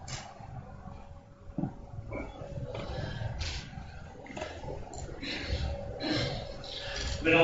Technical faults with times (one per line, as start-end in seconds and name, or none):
none